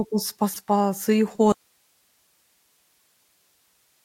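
At 0.53 to 0.56 s, a corrupt frame was decoded: a single damaged compressed frame was played as though valid, so misread codes and gains put energy in the wrong frequency bands. It comes through as a short chirp-like burst peaking around -20 dBFS.

From 1.52 s to the end, the speech cuts out abruptly and only hiss remains, roughly 40 dB below the earlier signal level. This is an audio dropout to a faint residue, likely a loss of the source while the downstream path stayed live.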